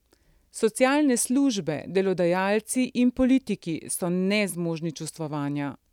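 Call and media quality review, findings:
No audible defects found on the speech path; nothing to log against any component.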